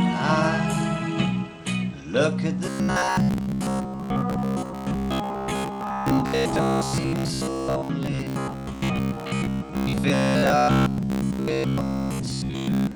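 From 2.66 s to 12.95 s the sound turns into a rigid, metallic buzz pitched at 66.7 Hz: robotic sound from repeated short buffers. The likely cause is audio arriving too slowly, so playback loops the last 15 ms segment for most of the stretch while real material is skipped. On a waveform, identical 15 ms blocks repeat back to back. A spectrogram shows a dense comb of harmonics spaced 66.7 Hz apart, with regular vertical striping.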